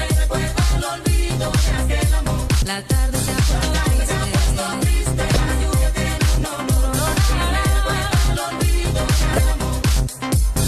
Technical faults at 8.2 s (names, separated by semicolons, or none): none